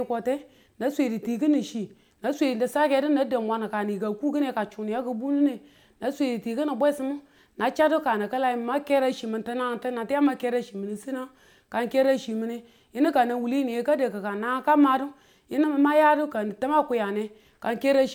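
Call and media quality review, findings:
No findings from the call and media quality review for this clip.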